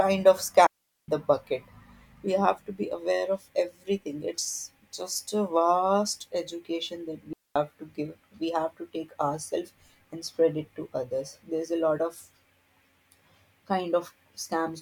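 Digital wireless dropouts at 0.67 s (about 420 ms) and 7.33 s (about 230 ms): the receiver lost too much data and muted with a brief fade, leaving clean near-silent gaps in the speech without noise bursts.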